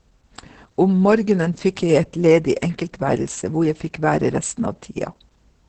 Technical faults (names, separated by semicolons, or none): Opus voice compression